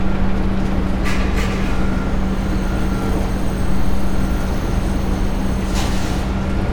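Nothing stood out as a technical problem on listening to these everyday sounds.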